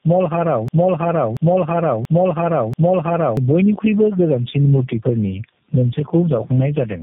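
From start to finish the speech is rough, muffled and warbly, with nothing above 3.8 kHz. This points to tandem speech coding, with the call decoded and re-encoded at several network borders, a chain that sounds like AMR-NB and G.711 legs ending in G.729A. Unlike a single low-bitrate codec, the damage compounds as each coder works on the previous coder's artefacts.

Also throughout, the sound is squashed, loud and soft parts pulled closer in level, with a gain swing of around 20 dB. This is gain pumping, likely from input gain set far too high with a fast limiter clamping it. It differs from plain clipping because the level itself breathes rather than the waveform tearing.

From 0.68 to 3.37 s a broken-record loop takes over. A 0.68 s fragment repeats exactly, back to back, four times, likely because the stream stalled and kept resending its last buffer. The audio due in that span is lost. 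Unlike an echo, the repeats don't decay, and each one starts at the same point.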